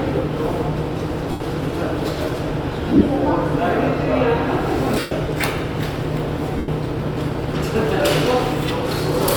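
Lost LE Audio frames break up this everyday sound at 1.31–1.40, 2.88–3.07 (scattered short gaps up to around 30 ms), 4.99–5.12 and 6.57–6.68 s. Each time, the LC3 decoder fills the gap by repeating the last spectrum with randomised signs, so tones smear into noise.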